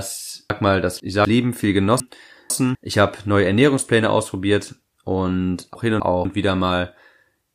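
From 0.5 to 1.25 s and again from 2.0 to 2.75 s, chunks out of order jumble the speech. A 250 ms chunk plays two chunks late. At 5.75 to 6.25 s, after "ausprobiert und", one chunk swaps with the next. Each scramble leaves three hard joins.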